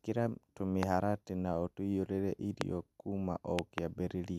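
A likely voltage spike, perhaps from a switch or static discharge, causes a loud pop at 0.83–0.85 s, before "na ũtũiyũrie", and another at 2.61–2.63 s, after it. A double pop follows at 3.59–3.80 s. Each peaks roughly 20 to 25 dB above the speech, which continues underneath.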